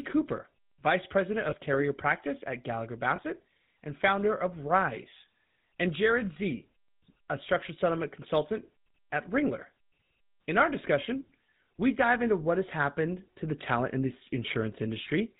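Speech coded through the GSM full-rate codec throughout, with plainly audible damage. The audio band stops at 4 kHz, and the regular-pulse excitation, which keeps only every third sample, leaves a buzzy, gravelly roughness on the voice, consistent with the 13 kbps full-rate coder. Lost GSM frames occur at 1.50–1.54 s and 3.16–3.20 s, each a single missing 20 ms frame. The decoder repeats the previous good frame's parameters, so each gap is heard as a brief rough, metallic ring rather than silence.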